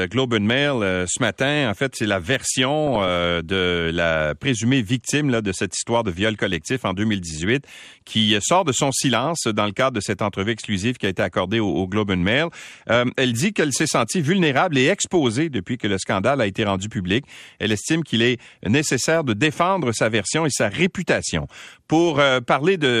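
Throughout, the speech sounds dull and gurgling, likely from MP2 compression at a low bitrate near 80 kbps. Upper sub-bands drop out and the remaining bands are coarsely quantised.

DAB burbling hits at 2.87 to 3.16 s, before "de la présumée victime", and at 12.95 to 13.18 s, before "elle dit qu'elle s'est". Bit errors corrupt sub-bands, causing short blips of noise in single sub-bands.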